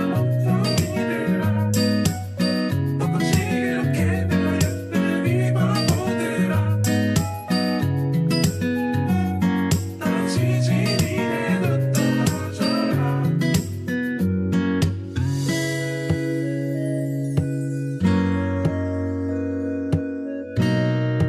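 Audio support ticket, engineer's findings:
No faults found; nothing audible to report.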